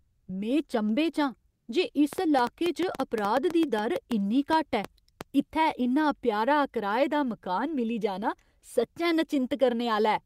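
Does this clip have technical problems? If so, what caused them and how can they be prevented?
Yes, there are two. At 1.53 to 1.67 s, comfort noise appears in place of the background. The sender's voice detector likely judged the pause silent and stopped transmitting, a discontinuous-transmission pattern that fits Opus DTX. For about 140 ms the receiver substitutes synthetic noise at the same level as the real background, which sits about 48 dB below the loudest speech. The background's texture turns flat and featureless. Disabling DTX, or lowering the detector's sensitivity to quiet backgrounds, prevents this.

From 2.13 to 5.22 s, ending just before "इत्थै इन्ना प्यारा कराए", a train of clicks runs over the speech, likely from electrical interference or a faulty connection injecting repeated pulses. There are roughly twenty, at about 5.8 per second on average but irregularly spaced. Each has much the same shape and peaks well above the speech, so they are heard as sharp ticking in the pauses as well. 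Shielding or rerouting cables, moving away from interfering equipment, and checking the interface's drivers and connection prevent it.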